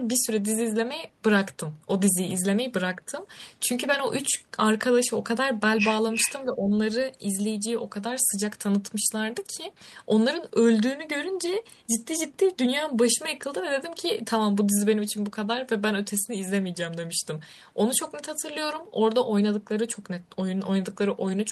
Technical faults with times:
6.14-6.32 echo leak
6.46-6.72 speech suppressed in double talk

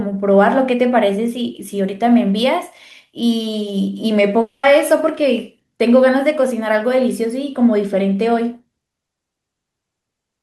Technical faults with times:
4.41-4.65 long network dropout

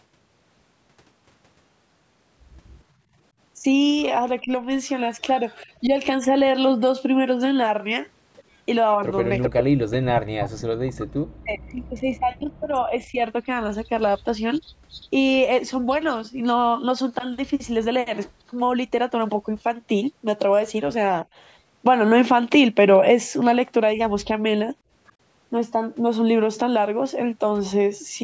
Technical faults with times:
2.94-3.18 background gated by the echo canceller
4.42-5.91 speech suppressed in double talk
5.19-5.66 echo leak
8.37-10.22 echo leak
9.53-13.21 speech suppressed in double talk
14.64-16.17 echo leak
18.16-18.31 echo leak
25.07-25.13 echo leak

